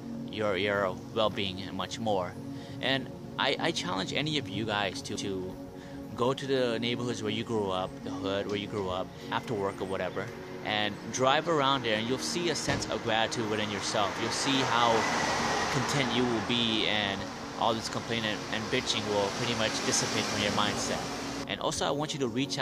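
Nothing goes wrong anywhere in this one; there's no technical fault to point to at any moment in the recording.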